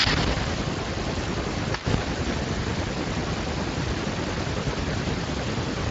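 From start to finish the speech passes through the Speex codec at a reduced bit budget, which fits a rate of around 20 kbps. With too few bits to code the excitation faithfully, the voice comes out plainly degraded, with a noisy, hoarse roughness.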